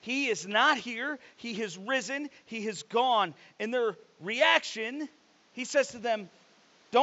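Speech clip with no technical faults; the only background is room noise sitting about 36 dB below the voice, which belongs to the recording space rather than the system.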